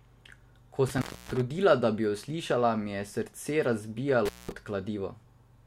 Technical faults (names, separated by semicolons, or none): intermittent contact